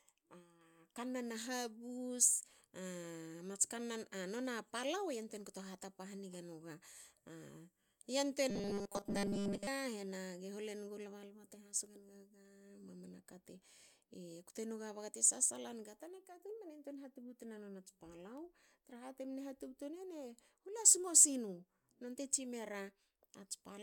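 From 8.50 to 9.67 s, the speech takes on a robotic sound from repeated short buffers. The voice collapses into a rigid, metallic buzz at a fixed 200 Hz. It still tracks the words loosely. The likely cause is audio arriving too seldom, so the software keeps replaying the last slice instead. A 200 Hz buzz fits a slice about 5 ms long. Most of that stretch, roughly two thirds or more, is repeated rather than real audio.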